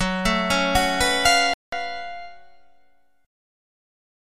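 From the start, channel delay (comb filtering) hollows the sound. One channel lags roughly 1.5 ms, so the mono sum cancels evenly spaced frequencies, starting near 300 Hz.

At 1.54 s the audio drops out until 1.73 s, about 190 ms. A Bluetooth dropout, likely from late packets, caused this gap.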